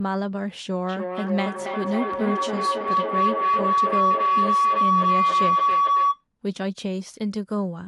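At 0.89 s a feedback howl begins and runs until 6.24 s. A microphone and loudspeaker are coupling, so each trip round the loop adds level. It narrows to a tone around 1 kHz, pulsing about every third of a second, and peaks about 5 dB above the speech.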